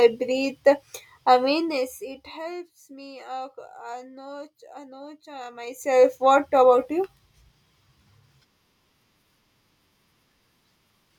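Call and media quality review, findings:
Zipper noise, 5.53 to 6.08 s. Level moves about 20 dB in 1 dB steps. Each step clicks, giving a ticking at roughly fifty per second. Probable gain stage stepping once per buffer, unsmoothed. Rate fits a 20 ms buffer.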